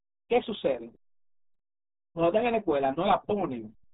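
RealAudio 14.4 codec damage runs from the first moment to the last, and it is heavy. The speech has passed through the RealAudio 1 speech coder, built for dial-up modems, and the thin, smeared result fits its 8 kbit/s rate. Nothing above about 3.8 kHz survives, so consonants lose their edge and the sound turns muffled. The coarse coding leaves a gargly, bubbling texture on every syllable.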